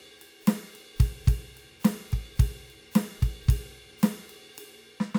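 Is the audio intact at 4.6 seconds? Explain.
Yes, the music plays through 4.6 seconds intact, with no dropout, click, distortion or other fault at that moment.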